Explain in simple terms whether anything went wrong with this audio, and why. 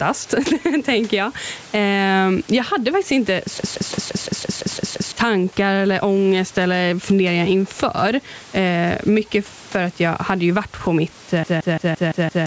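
System hang loop from 3.58 to 5.12 s, right after "jag hade faktiskt inte" and before "tankar eller ångest eller", and again from 11.44 to 12.46 s after "ju varit på mitt". The computer froze while the sound hardware kept replaying the same 0.17-second slice, producing a machine-gun stutter about six times a second. The speech that should have played is lost, roughly one and a half seconds the first time and about one second the second time.

Gain pumping runs through the whole clip, squashing loud and soft parts closer together. The likely cause is microphone gain set far too high, with a fast limiter pulling it down on each loud sound.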